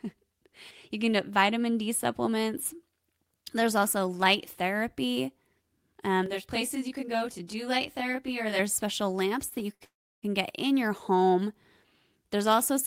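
A speech clip with timing faults clustered just before the ten-second mark. Two short stalls from a late packet come first, at 9.49 to 9.54 s and 9.74 to 9.82 s. In each, the next packet was not there in time and the jitter buffer ran dry. The receiver held the last sound until it came. That padding is 21 ms in the first and 60 ms in the second. Each is heard as a brief drawn-out sound with a slight buzz or dip. Nothing is lost, but the speech slips later by those amounts. A call audio freeze follows at 9.84 to 10.25 s. The last sound carries on and fades, then about 330 ms of silence sits in the stream. About 383 ms is inserted in all. The speech then resumes where it stopped, with nothing missing. The likely cause is packets held up in the network, which emptied the jitter buffer for much longer than the two stalls before it.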